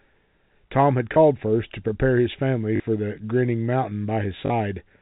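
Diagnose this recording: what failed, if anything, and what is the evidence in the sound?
The network stage dropped packets, and the receiver concealed each gap with packet loss with last packet repeated, replaying the most recent packet of the G.711 telephone-band speech. The repeats fall at 1.14 to 1.16 s, 2.76 to 2.80 s and 4.46 to 4.50 s. The first lasts 20 ms, which fits a single 20 ms packet, and the later two last 40 ms, which fits two in a row. The doubled repeats buzz briefly at about 50 Hz, giving a short robotic stutter.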